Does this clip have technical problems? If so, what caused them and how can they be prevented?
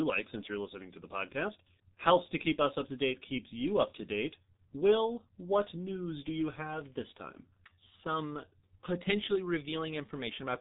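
Yes. Throughout, the speech sounds muffled and hoarse with smeared consonants and nothing above 3.8 kHz, which fits heavy G.723.1 codec compression at about 6.3 kbit/s. Prevent it by using a wideband, higher-bitrate codec instead of G.723.1.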